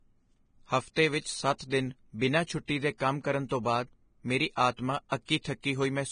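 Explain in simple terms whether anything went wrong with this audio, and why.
Yes, something went wrong, and it lasts the whole recording. The speech sounds hissy and grainy from start to finish. The crisp, airy top of the sound is missing. Nothing is heard above 9.7 kHz. Sharp consonants and the starts of sounds come out smeared. The likely cause is heavy Vorbis compression. To save space, it throws away the highest sounds and describes the upper detail so roughly that fine detail turns into noise.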